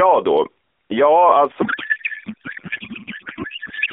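Speech over an AMR-NB narrowband link, band-limited to roughly 300 Hz to 3.6 kHz with light coding roughness consistent with the 12.2 kbps mode, breaks down at 1.62 s into a codec payload misread that lasts to the end of the clip. From that point the speech gives way to garbled noise and warble that barely tracks it. The decoder is accepting well-formed frames but reading their fields from the wrong bit positions, which fits octet-aligned AMR payloads being parsed as bandwidth-efficient.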